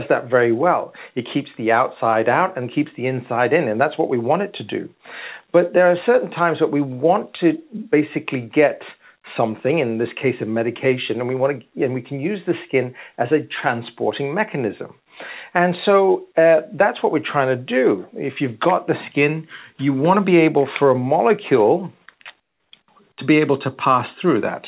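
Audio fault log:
22.40 to 22.72 s, comfort noise in place of the background. For 320 ms the quiet background, about 48 dB below the loudest parts, turns into a steady, featureless noise about 12 dB lower. The likely cause is discontinuous transmission, with synthetic noise filling the gap.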